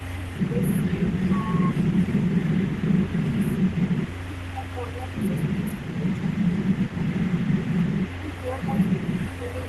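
Throughout the speech, an echo leak is audible: a faint repeat of the voice, roughly 20 dB down, trails about 180 ms behind the voice. It is likely a loudspeaker echo that the far end's canceller failed to remove. Unlike room reverberation, it is a distinct copy at a fixed lag rather than a smooth decay.

Speech is suppressed in double talk in three stretches: 0.05 to 1.69 s, 3.18 to 6.28 s and 7.87 to 9.1 s. The voice dips in pieces, by around 15 dB at worst in the first and last stretches and around 10 dB in the middle one. The affected parts add up to well under a second, about a second, and under half a second. The likely cause is the canceller turning down everything while both sides talk. Unlike packet loss, the sound sinks, dulls or cuts out in pieces instead of breaking up with clicks.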